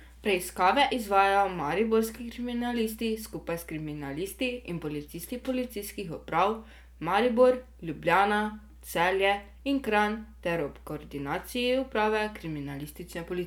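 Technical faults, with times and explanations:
Throughout, mains hum: a steady low tone at 60 Hz sits under the speech for the whole clip, with some low harmonics stacked above it. It sounds like the electrical supply leaking into the recording path, most often through a ground loop between connected equipment or the magnetic field of a nearby transformer. It sits roughly 25 dB below the speech and gives the voice a droning floor.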